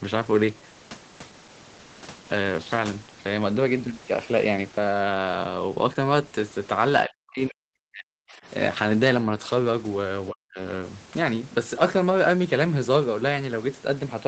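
Speech suppressed in double talk hits at 7.05 to 8.46 s and again at 10.31 to 10.6 s. The speech sinks by around 40 dB, nearly vanishing. The likely cause is an echo canceller mistaking overlapping talk for loudspeaker echo and muting both.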